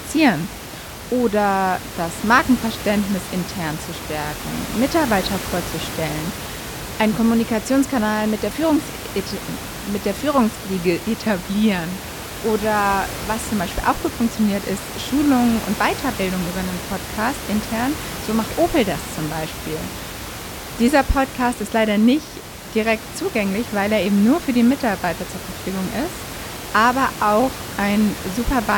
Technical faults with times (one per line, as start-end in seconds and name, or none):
none